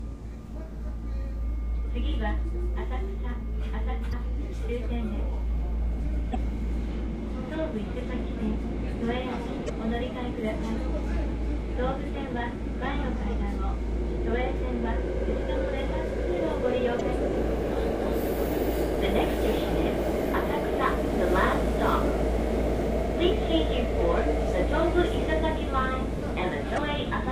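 Brief glitches at 4.09, 6.31, 9.66, 16.97 and 26.74 s, each about 40 ms long, come from damaged data in a compressed stream, where the decoder misreads corrupted frames and loses sync.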